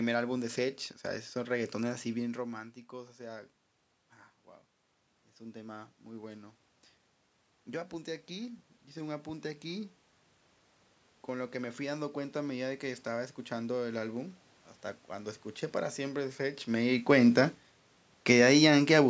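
Near the end of the speech, from 16.72 to 19.05 s, the level sinks by about 3 dB, and the room noise behind the voice drops with it. This is automatic gain falling: the gain control judged the input too loud or its background noise too strong and eased its gain down over those two seconds, pulling the whole signal lower rather than just the voice. This is separate from the talker shifting position around 2 s and again around 16.5 s, which changes only the voice's loudness at the microphone. The call's microphone processing leaves nothing above 8 kHz.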